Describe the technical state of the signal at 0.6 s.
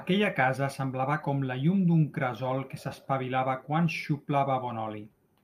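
At 0.6 s the speech signal is intact, with no audible technical fault.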